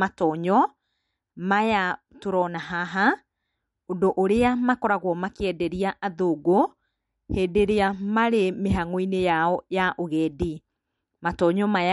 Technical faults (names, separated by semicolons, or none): MP3 compression